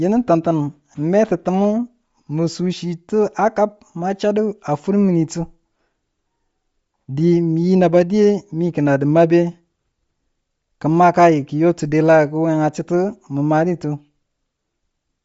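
Throughout the speech, the signal was likely squeezed through Bluetooth LC3 compression at a low rate, consistent with 32 kbps in 10 ms frames. Nothing survives above 7.7 kHz, and the top of the band has a plainly audible breathy, grainy edge.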